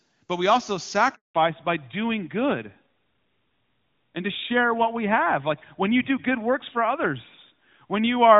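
Speech that cuts out in a handover gap right after "but we also", falling silent from 1.15 to 1.35 s, a 200 ms hole where no frames arrived while the call switched networks. The sound stops cleanly and nothing is repeated or smeared, so it is lost data rather than a glitch or dropout inside the codec. From 1.35 s to the end it shows a fallback to narrowband: everything above 4 kHz is gone for good, which fits a drop from wideband AMR-WB to AMR-NB, likely at 12.2 kbit/s. The voice turns dull and rough. Before the switch, the HD Voice stretch sounds clean, with content up to about 7 kHz. Because the band limit is a steady ceiling that begins exactly at the gap, it points to a codec change and not to muffling from the microphone or the room.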